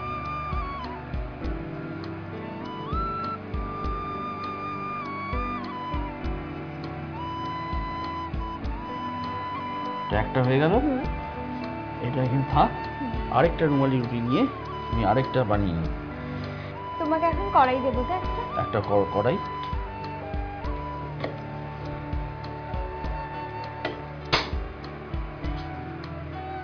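No technical faults are audible anywhere in the audio.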